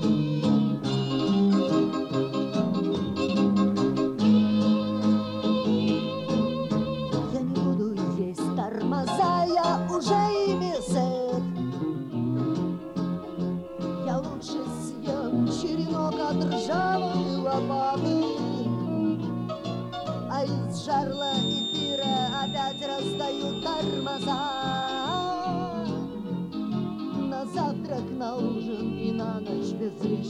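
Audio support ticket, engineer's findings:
Speaker-to-mic loop likely sitting at the edge of feedback, 21.08–25.35 s: a thin feedback whistle at 3.6 kHz rings on, roughly 10 dB under the audio.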